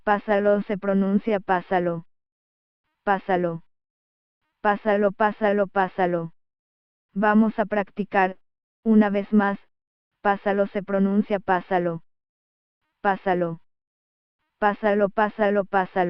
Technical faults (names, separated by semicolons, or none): none